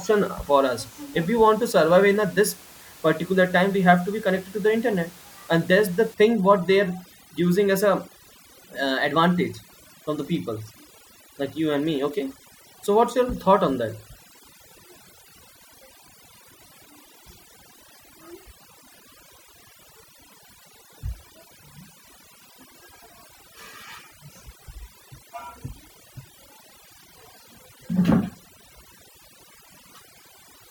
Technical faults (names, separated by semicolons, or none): overdone noise removal